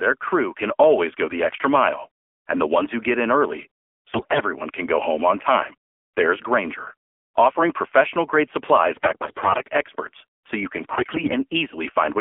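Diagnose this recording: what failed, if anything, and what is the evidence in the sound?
Codec stage: the AMR narrowband mobile codec runs throughout. The speech is confined to 300 Hz–3.4 kHz and sounds buzzy and synthetic, which fits a low rate near 7.4 kbps. Plain band-limiting would leave it dull but clean.

Network stage: AMR bit errors occur at 4.12–4.41 s after "who get in early", 8.96–9.70 s after "offering professional grade", and 10.84–11.32 s after "experts so you can". Pitch and level hold while the speech turns hoarse and gargly, because flipped bits misplace excitation pulses. Lost frames would drop out instead.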